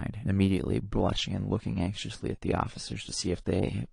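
An adaptive stream at a lower bitrate takes over at 0.82 s and lasts to the end of the speech. The stream falls back to a leaner version, most likely because the connection slowed, and the switch is abrupt with no gap. From that point nothing is left above 10 kHz, so the treble is gone, with codec artefacts rising in a way that fits a drop from about 96 kbit/s to 32 kbit/s AAC.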